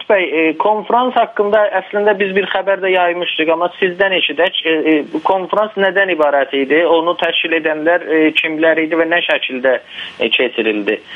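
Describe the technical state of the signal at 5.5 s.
At 5.5 s the sound is squashed, with a gain swing of roughly 15 dB. Loud and soft passages sit unnaturally close in level. This is gain pumping, present throughout the clip rather than only here. The likely cause is input gain set far too high, with a fast limiter or compressor clamping down on every loud sound and releasing between them.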